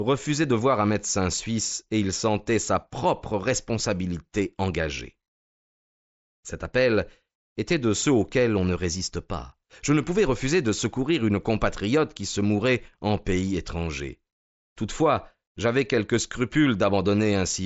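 The clip is speech, and nothing is technically wrong with it.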